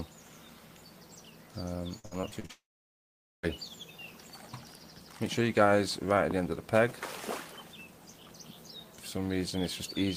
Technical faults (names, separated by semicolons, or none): repeated packet loss (robotic sound); long network dropout